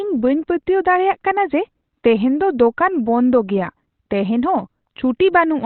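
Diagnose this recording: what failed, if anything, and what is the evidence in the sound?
The codec stage is the likely culprit: Opus compression running at a very low bitrate, which fits about 12 kbps, in its SILK speech mode at narrowband. Nothing above 4.2 kHz survives throughout, so the speech sounds muffled, thin and hoarse, with heavy codec damage.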